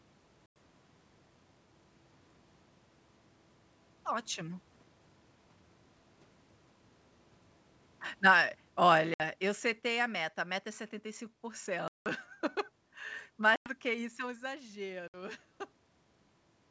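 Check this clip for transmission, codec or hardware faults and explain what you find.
Yes, there are transmission faults: five packet-loss gaps on an ADPCM call, plus two automatic gain changes, one falling and one rising.

Packet loss on an ADPCM call occurs at 0.46–0.57 s, 9.14–9.22 s, 11.88–12.09 s, 13.56–13.75 s and 15.08–15.15 s. The losses are about 100, 60, 180, 100 and 60 ms, which fits packets of roughly 20 ms going missing in short runs. Each lost stretch is replaced by silence, so the speech drops into a hard-edged hole. ADPCM codes each sample as a correction to a prediction, so the receiving decoder's predictor and step size no longer match the sender's once packets are missing. When speech returns after each gap, it comes back slightly distorted, at times with a click or at the wrong level, then settles within a few tens of milliseconds. The 180 ms gap near 11.9 s is the longest.

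Automatic gain falling runs from 8.12 to 10.3 s. The gain control judged the input too loud or its background too strong and pulled its gain down by about 11 dB. Because the change is gradual, the speech starts loud and then sinks steadily, and the room background sinks with it, which shows the change comes from gain rather than the talker. The 9.14 s packet-loss gap falls inside this descent.

Automatic gain rising runs from 13.94 to 15.48 s. Around 14 s the talker moves away and the input at the microphone falls by about 12 dB. The gain control responds by slowly raising its gain by about 4 dB, so voice and background swell together over roughly a second and a half. This only partly restores the level, and the loss at 15.08 s lands during this swell. The G.722 wideband coding itself leaves faint or no audible damage.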